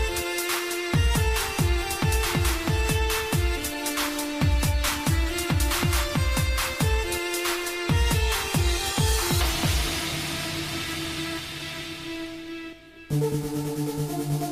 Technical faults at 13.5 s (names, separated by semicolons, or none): channel delay (comb filtering)